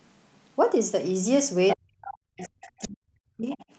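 At 1.69 to 1.76 s a brief burst of the other side's voice leaking through sits nearly as loud as the speech itself, likely loudspeaker echo that the echo canceller failed to remove. The same residual echo returns far lower, well beneath the speech, at 2.39 to 2.88 s and 3.5 to 3.64 s.

From 1.76 to 3.6 s the speech is suppressed in double talk: for roughly 1.5 s in total it dips and drops out in pieces, at worst by around 40 dB, as the canceller, likely unable to separate the near voice from the echo, turns both down.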